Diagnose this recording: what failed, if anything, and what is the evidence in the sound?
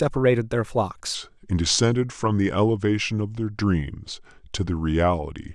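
A likely clock mismatch during playback or editing has left a section at the wrong speed. From 1.15 s to the end, the speech runs at 0.85 times its recorded speed, so it turns slower and deeper, dropping by about three semitones at the same instant. Because speed and pitch fall together and the shift is abrupt, the material is being replayed against a slower sample clock than the one it was recorded with.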